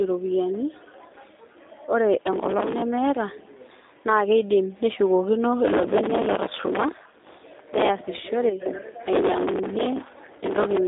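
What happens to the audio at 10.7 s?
At 10.7 s the speech is near the end of a processor overload crackle that runs from 9.13 s to 10.77 s. The processor keeps missing buffer deadlines, which fits buffers of roughly 5 ms, and each miss replays stale audio with hard edges. A long run of these misses produces gritty tearing that stops at 10.77 s. Because stale audio is repeated rather than silence inserted, this sounds rougher and denser than scattered dropout clicks.

Underneath, the speech also carries G.729 codec damage that is present throughout. At 8 kbit/s it is rebuilt from a vocal tract model, a pitch predictor and sparse pulses, so it sounds plainly rough and synthetic. The band spans roughly 250 to 3700 Hz, with nothing above 3.8 kHz. A simple telephone filter would sound muffled but clean, whereas this codec adds the synthetic roughness.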